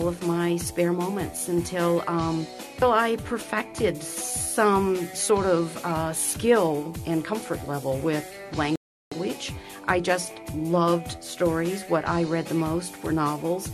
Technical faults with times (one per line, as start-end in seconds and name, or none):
8.76-9.12 rebuffering stall